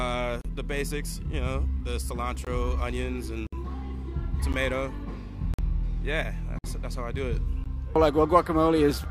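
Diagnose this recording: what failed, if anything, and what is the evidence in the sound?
Hard-edged silent holes of 13 to 58 ms interrupt the sound at 0.41–0.45, 2.45–2.47, 3.47–3.53, 4.53, 5.54–5.59, 6.59–6.64 and 7.64–7.66 s, spaced about a second apart. This is a network-stage gap between stream segments. The timestamps of 1-second segments leave small holes, and the player pads them with silence.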